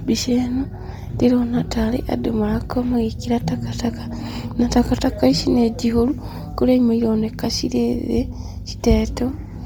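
Bluetooth LC3 compression runs throughout: the speech has a breathy, grainy upper edge where the top of the spectrum has been discarded and refilled with noise, likely from the LE Audio codec at a rate that fits about 32 kbps in 10 ms frames, cut above 20.2 kHz.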